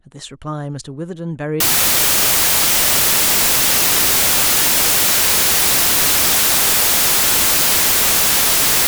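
Speech clip in which, from 1.60 s to the end at 8.87 s, the samples are built from the wrong bytes: the decoder assembles each sample from misaligned or misordered bytes, so the rapidly fluctuating low-order bits end up carrying most of each value. The result is loud, harsh broadband noise.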